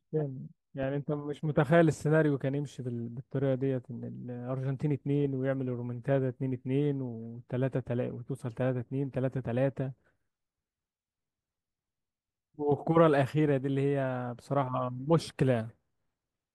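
No technical faults can be heard anywhere in this speech recording.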